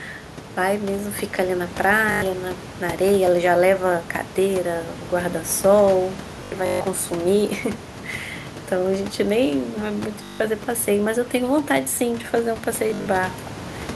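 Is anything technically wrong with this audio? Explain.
Yes. There is Bluetooth stutter at 2.12, 6.44, 10.23 and 12.90 s. Late or lost packets made the receiver replay its last slice, giving a buzzy repeat before the speech jumps ahead. The room noise sits about 17 dB below the speech.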